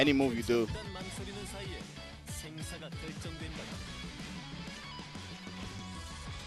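Nothing here stands out as a technical fault; the audio just runs along without any glitches worth pointing to.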